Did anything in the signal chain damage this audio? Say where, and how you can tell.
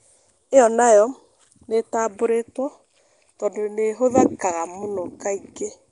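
Yes, Nellymoser compression runs through the whole speech clip, at the codec stage. A rough, hissy halo and smeared, underwater tone, with nothing above 10.6 kHz, point to the likely cause: fixed low bit allocation, fitting roughly 44 kbps, leaves weak bands empty and refilled with noise.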